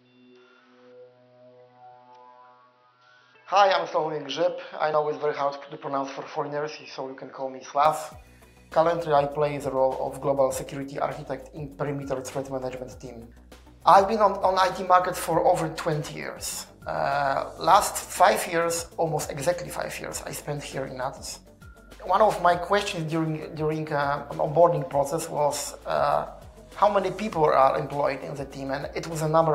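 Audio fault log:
0.00–7.85 s, input switched to a poorer device: sound is dull, nothing above 6 kHz, slightly quieter, faint extra background noise, likely a narrower-band microphone before switching back.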